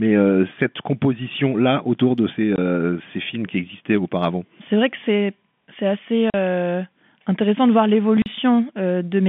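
Right after "que c'est c'est assez" at 6.30 s, and again after "intéressant de voir" at 8.22 s, there's packet loss filled with silence: 40 ms holes with hard edges, which fits two 20 ms packets dropping out each time on this narrowband telephone line.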